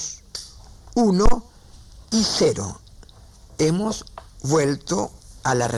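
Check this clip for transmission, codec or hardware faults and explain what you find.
One hardware fault is present. From 1.26 to 1.37 s there is a phantom power thump. A supply switched on or off a live input sent a voltage step through the coupling capacitors. It is a deep thump peaking near -5 dBFS and fading within about 24 ms.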